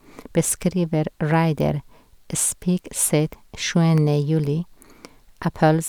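Between 3.33 s and 4.19 s the speech carries CD scratch ticks: five short clicks spaced roughly a fifth of a second apart, the longest lasting about a millisecond. A scratch or blemish on the disc wipes out more data than the player's error correction can rebuild, once per revolution, so the player interpolates across or briefly mutes the damaged samples. Each pass produces a tiny hard-edged tick in the audio.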